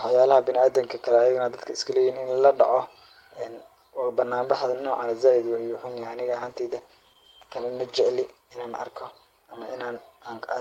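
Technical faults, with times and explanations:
6.32–9.23 s, call bitrate drop: the speech turns rough and muffled, which fits the encoder being starved from around 32 to 15 kbps, with the worst stretch lasting 1.84 s. On a spectrogram the upper frequencies thin out and smear, while the waveform's level stays steady.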